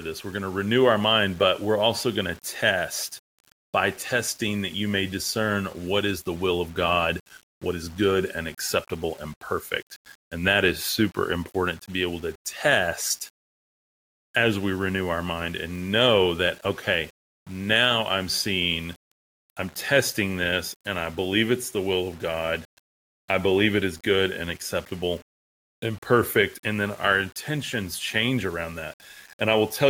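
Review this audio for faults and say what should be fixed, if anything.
Throughout the speech, quiet passages turn grainy and gritty, and the softest tails break up into sputtering steps or drop out. This is likely low bit depth without dither: the error tracks the signal at roughly 30 dB below it, which fits rounding to about 7 bits. To prevent it, keep at least 16 bits and apply dither whenever reducing word length.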